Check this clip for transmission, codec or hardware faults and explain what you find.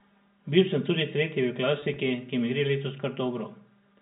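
Two faults affect this speech clip, which was carried over G.711 mu-law telephone coding at 64 kbps, audible as the usual 4 kHz ceiling.

Channel delay (comb filtering) runs throughout. One channel lags by around 5 ms before a mono sum, cutting evenly spaced notches from near 100 Hz upward. The result is a hollow, phasey tone, unlike G.711's plain top-end cutoff.

Packet loss with pitch repetition occurs from 1.80 to 1.96 s. About 60 ms goes missing, scattered across 160 ms in runs of no more than 20 ms, which fits three lost 20 ms packets. The concealment repeats the last pitch period, so each gap sounds like a brief buzzy hold rather than silent dropouts.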